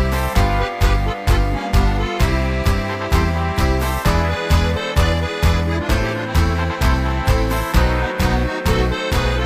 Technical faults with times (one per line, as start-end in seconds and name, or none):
none